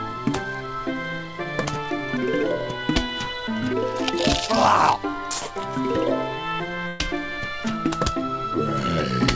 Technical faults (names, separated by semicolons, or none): burst of packet loss